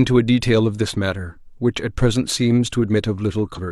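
Around 3.53 to 3.60 s, compressed frames were skipped: the decoder never played a run of roughly seven frames, which fits a 46.4 ms frame length. About a third of a second of speech drops out.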